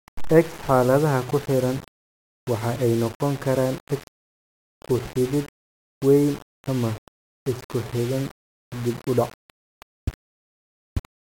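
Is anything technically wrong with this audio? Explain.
Yes. Throughout the speech, low bit depth without dither is likely, with plain rounding consistent with 6 bits, leaving signal-tracking grit about 20 dB down that roughens quiet passages and sputters near silence.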